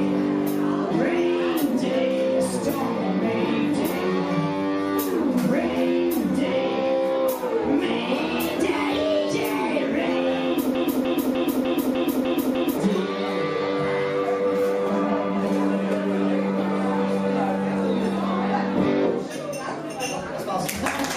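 From 10.75 to 12.78 s, a broken-record loop repeats one 0.3 s fragment seven times, likely a stalled stream; the spectrogram shows identical blocks tiling side by side.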